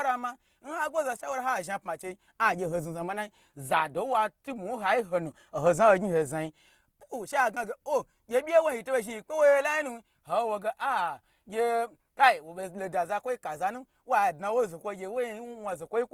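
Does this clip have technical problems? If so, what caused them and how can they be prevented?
Yes. Throughout the speech the sound is grainy and rough, with a noisy sheen on tonal parts, and the damage is plainly audible even though content still reaches about 20.2 kHz. The likely cause is Opus compression in its music (CELT) mode at a rate around 24 kbps, where starved bands are filled with noise or folded copies rather than left empty. That is why it sounds grainy instead of swirly like MP3. To prevent it, encode at a higher Opus bitrate.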